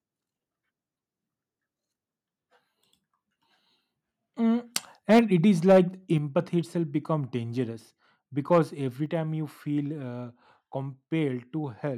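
From 5.10 to 5.19 s the speech turns harsh and crackly. This is microphone overload. Peaks run about 5 dB past the converter's limit, and roughly a fifth of samples lose their tops. Input volume was likely set too high. At 5.19 s the level drops by about 3 dB. This is the microphone volume stepped down, likely the call software cutting gain after the clipping. Overload returns from 5.69 to 5.78 s, about 5 dB over. Another step, about 5 dB, follows at 6.18 s. A milder overload, about 2 dB over, hits from 8.51 to 8.59 s. A final step of about 4 dB comes at 9.06 s.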